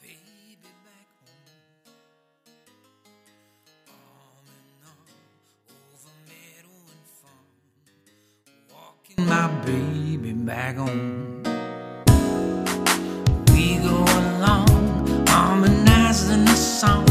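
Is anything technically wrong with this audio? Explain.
Yes. From the start to 9.18 s the sound collapses to a faint residue, about 31 dB down, with the shared sound, background included, nearly gone. The likely cause is one channel inverted: reversed polarity cancels everything shared between channels once they are summed.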